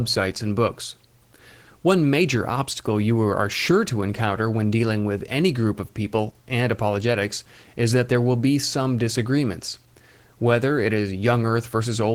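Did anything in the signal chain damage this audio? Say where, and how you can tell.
Yes. The damage happens at the codec stage and runs through the whole speech clip. It is Opus voice compression in hybrid mode, and the sound fits a bitrate around 16 kbps. A linear-prediction layer codes the band below 8 kHz with a coarse excitation, which makes the speech plainly hoarse and slightly robotic. A thin transform layer covers the fullband range above that. On a spectrogram the upper band looks sparse and smeared, with blocky texture at 20 ms frame steps.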